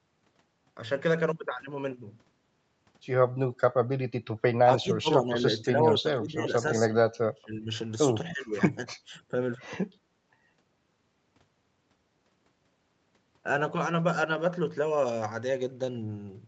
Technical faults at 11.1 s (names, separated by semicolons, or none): none